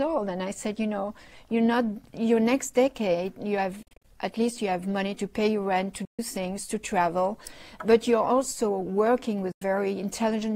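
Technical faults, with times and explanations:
3.82–4.05 s, 6.05–6.19 s, 9.52–9.62 s: Bluetooth dropout. Audio packets likely missed their delivery deadline to the headphones and were discarded, so the output goes silent: 147 ms lost in short gaps (longest 40 ms) first, then 133 ms and 93 ms. Sound resumes further along, as if it had kept playing.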